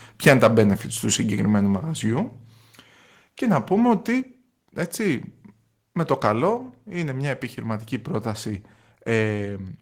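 In the opening of this speech recording, from 0.26 to 0.64 s, the loudest syllables take on a harsh, crackling edge as their peaks are flattened. This is microphone overload, likely from an input level running about 10 dB past the converter's limit, which shears the tops off a small share of the waveform. The whole signal, voice and background together, also drops abruptly in level three times: by about 2 dB at 0.28 s, about 4 dB at 4.2 s and about 2 dB at 6.57 s. Each is a microphone volume stepped down, likely the call software reacting to the too-hot input by cutting the device gain in one jump.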